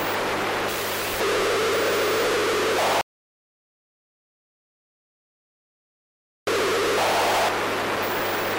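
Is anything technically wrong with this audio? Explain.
Yes. From 3.01 s to 6.47 s the sound stops abruptly and the clip goes completely silent, with no background or room tone, until the audio resumes just as suddenly mid-flow. This is an audio dropout to silence lasting about 3.46 s. The likely cause is that the input signal was lost, through a disconnected device, a failed link or an accidental mute, while recording continued and filled the gap with silence. Whatever sounded during that stretch is gone.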